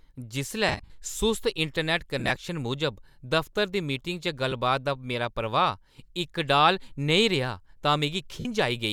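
Speech with lost LE Audio frames in four places. From 0.69 to 0.90 s the sound breaks into a scattered noisy smear, with the longest gap around 50 ms. From 2.19 to 2.36 s there are shorter scattered dropouts. There is a tiny blip at 4.51 s and a solid 52 ms gap from 8.40 to 8.45 s. The LC3 decoder filled each gap by repeating the last spectrum with random signs. That makes the sound hiss and fade. The gaps fit 7.5 ms frames.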